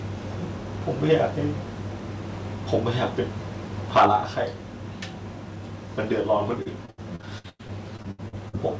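At 1.11 s the loudest peak breaks into a brief harsh crackle, about 2 dB past the limit. At 3.95 s it returns far worse, about 8 dB over, lasting to 4.16 s. The flattened peak tops most likely come from microphone overload: input gain set too high for the converter.

At 3.99 s, inside that second burst, the whole level drops by about 4 dB in one step. Background falls with it. This is most likely a microphone volume stepped down by the call software reacting to the distorted peak.

From 6.62 s to 8.55 s the sound turns choppy and robotic. This is repeated packet loss. More than a dozen gaps, the longest 100 ms, are patched by stretching the previous sound. Almost a third of the span is concealed this way. The G.722 call path passes nothing above 8 kHz.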